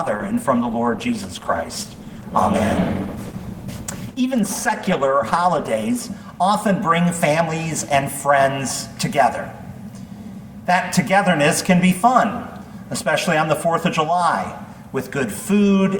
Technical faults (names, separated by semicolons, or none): adaptive stream starting at a low bitrate